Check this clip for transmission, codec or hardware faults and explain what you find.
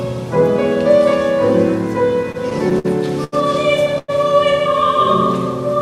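Three transmission faults, all from packets arriving late, occur within about two seconds.

From 2.23 to 2.86 s the sound drags and stutters through six brief holds, the longest 53 ms. These are repeated stalls (stutter): the jitter buffer kept running dry and the last sound was extended.

From 3.24 to 3.34 s a sound is held about 81 ms too long. This is a short stall from a late packet, with the receiver stretching audio until it arrived.

From 3.98 to 4.10 s the sound hangs for about 100 ms as a fading buzz or hiss before resuming. This is likely a call audio freeze, with packets held up in transit.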